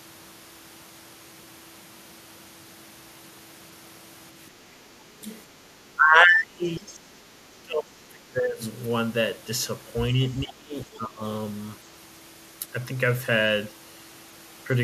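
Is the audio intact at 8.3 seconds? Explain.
No. Speech suppressed in double talk runs from 7.62 to 8.62 s, with the speech pushed down by roughly 25 dB at its deepest. The likely cause is an echo canceller that couldn't separate the near talker from loudspeaker echo and attenuated both.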